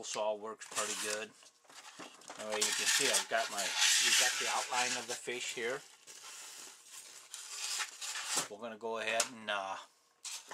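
At about 8.24 s there's a quick glitch from overlapping chunks. The audio seems to have been handled in pieces of roughly 3.0 s, and at this join the next piece starts a little before the previous one finished, so about 6.5 ms of sound gets played twice. It's brief, so it comes across as a small click or tiny stutter rather than an obvious repeat.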